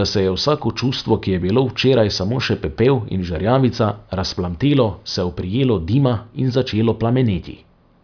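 Listening to the speech recording, nothing technical stood out.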